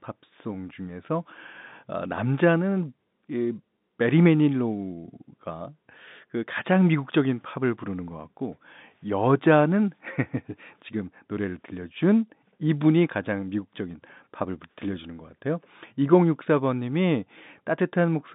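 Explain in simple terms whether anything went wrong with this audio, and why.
Nothing went wrong here: the speech comes through an ordinary G.711 telephone connection working as it should, so it has the narrow sound of a normal phone call, carried between about 150 Hz and 3.7 kHz with nothing above about 4 kHz, which is simply the range a standard phone line passes.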